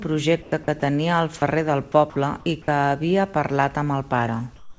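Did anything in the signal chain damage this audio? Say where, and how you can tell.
Yes. In the call processing stage, comfort noise replaces the background from 0.42 to 0.52 s and again from 4.56 s to the end. The room tone turns into a flat, featureless hiss, about 2 dB and about 5 dB quieter. This is likely discontinuous transmission, with the receiver synthesising noise while the sender is silent.

Sound is also dropped by the voice detector at 0.64 to 0.68 s, 0.80 to 0.82 s and 2.10 to 2.16 s. Short stretches of the speech itself, 20, 10 and 30 ms long, give way to steady noise. The detector likely misjudged the speech as background and stopped sending.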